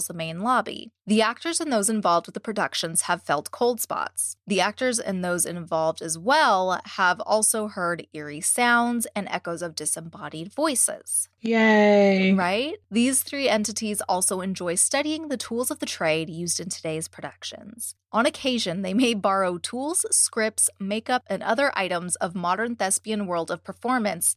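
No technical faults can be heard anywhere in this speech recording; the signal stays steady and intact throughout.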